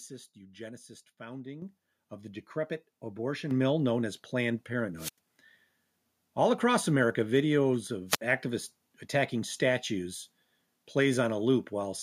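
Microphone volume stepped up twice, at 1.62 s and 3.51 s: the input gain rose abruptly, by about 9 dB and about 6 dB, lifting voice and background together. Wireless microphone squelch dropout followed, from 4.97 to 5.18 s and 8.08 to 8.21 s: the fading radio signal tripped the receiver's mute, giving rising hiss, then near-silence holes of 92 ms and 59 ms.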